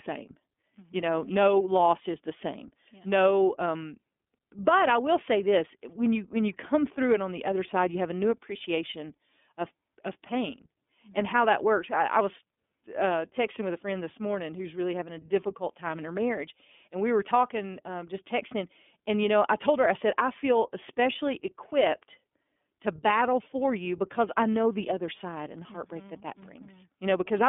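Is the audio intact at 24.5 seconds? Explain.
No. At 24.5 seconds, as throughout, the speech sounds thin and rough, with nothing above 3.7 kHz. This is iLBC codec damage: each 30 ms frame is coded independently, consistent with the 13.33 kbps mode.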